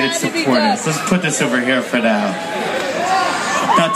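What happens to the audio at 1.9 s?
Nothing goes wrong at 1.9 s; the audio plays through that moment intact.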